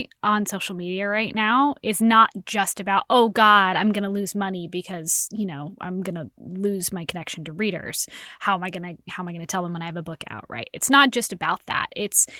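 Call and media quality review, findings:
Nothing to flag on this speech recording; the audio came through without any audible fault, so no component needs a closer look.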